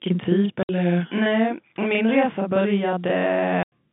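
A speech clip on a telephone line, with the band limited to roughly 150 Hz to 3.6 kHz by the G.711 coding. Its faults are a constant doubling and two dropouts. The channel delay (doubling) runs throughout. One channel arrives 40 ms late and is summed into mono with the other, so every syllable is followed by an equal-level copy that thickens the sound into a short slap. On a waveform each onset shows twice, 40 ms apart. On a spectrogram the summing cuts regular comb notches across the band, spaced 25 Hz apart. Packet loss filled with silence opens two holes, at 0.63 to 0.69 s (60 ms) and at 3.63 to 3.72 s (90 ms). These lengths fit a 30 ms packet, lost two and three at a time. The waveform drops to silence with abrupt edges. The spectrogram shows blank vertical strips.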